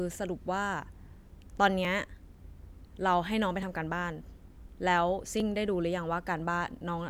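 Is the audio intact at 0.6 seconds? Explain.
Yes, the audio is intact at 0.6 seconds, with no dropout, click, distortion or other fault at that moment.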